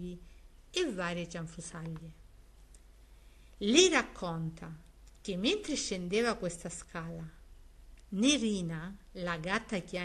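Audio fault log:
Nothing stood out on listening, and no fault is heard anywhere in the clip.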